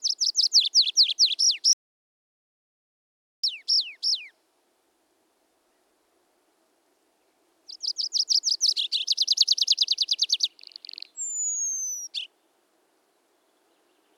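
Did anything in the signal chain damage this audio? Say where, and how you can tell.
Yes. An audio dropout to silence runs from 1.73 s to 3.44 s, about 1.71 s of silence with no room tone, cut in and out mid-flow. That points to the input stage, likely a lost device or link while the recorder kept writing samples.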